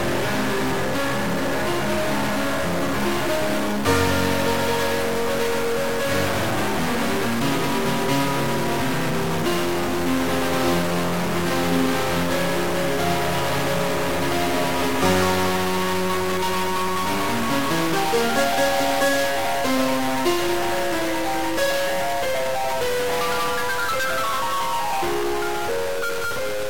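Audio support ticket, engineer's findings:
Stuck bit, throughout the music. Distortion riding on all material; quiet passages and gaps filled with hiss-like noise instead of silence. Waveform: samples offset by a fixed step, jagged around zero crossings. Spectrogram: broadband haze across all frequencies, visible even where levels drop. Cause likely a broken data line or converter bit holding constant, altering roughly half the samples by that bit's weight.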